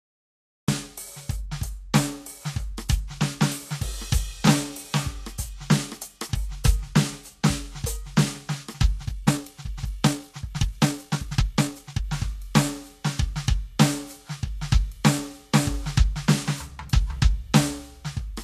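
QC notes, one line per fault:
throughout: Vorbis compression, likely: treble is grainy and hissy, tones roughened, attacks blurred. The spectrogram shows a lowered cut-off and mottled upper bands, fitting roughly 35 kbps.
0.00–0.68 s: cut-off start. Digital silence, then the music begins abruptly mid-sound at 0.68 s, with no attack or fade. The waveform jumps straight from a flat line into the sound.
8.99–12.05 s: time-stretched section, likely sped up about 1.66 times with pitch held. Playback turns rushed, and waveform events crowd closer together while spectrogram pitch lines stay level.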